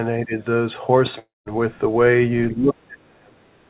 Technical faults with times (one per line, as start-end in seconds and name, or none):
0.25-0.33 speech suppressed in double talk
1.19-1.49 long network dropout
2.51-3.69 speech suppressed in double talk